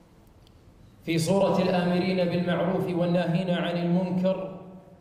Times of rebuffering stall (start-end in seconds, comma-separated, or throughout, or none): none